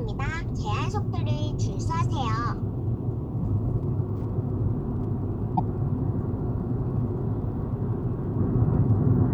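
From 3.31 s to the end, a steady ticking appears, about ten times a second. This is Wi-Fi interference. A nearby Wi-Fi radio sends a beacon every 102.4 ms, and the audio circuit rectifies it. The ticks sit very faint, far below the sound.

From 5.53 to 5.60 s, a short glitch breaks through. This is damaged data in a compressed stream. Bytes there were wrong, so the decoder misread the frames. It lost sync for about 70 ms and searched for the next frame header.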